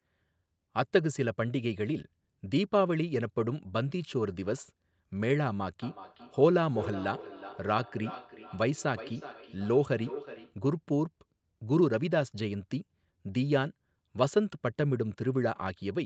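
From 5.82 to 10.62 s, a second device in the same room plays the call back and the first microphone picks it up again. This is feedback echo between two devices, which neither echo canceller catches. The speech returns roughly every 0.4 s, thinner and ringing, peaking about 14 dB below the direct speech.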